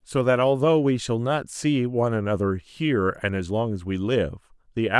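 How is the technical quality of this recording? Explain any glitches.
No technical faults are audible.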